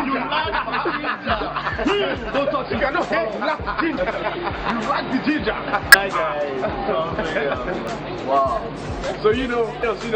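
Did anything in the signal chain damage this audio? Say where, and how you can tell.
Yes. Damaged data in a compressed stream appears at the codec stage as brief glitches at 1.05–1.07 s, 3.97 s, 5.92–5.95 s, 7.87 s and 9.82 s. Corrupted frames make the decoder misread them and lose sync until it finds the next frame header.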